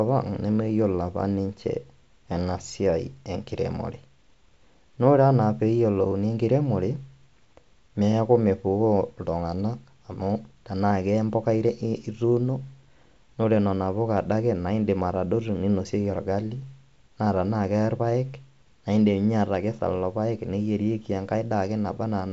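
Nothing here registers as a fault, just speech carried over G.722 wideband telephone coding at 64 kbit/s, with the codec leaving at most a faint mark on the sound.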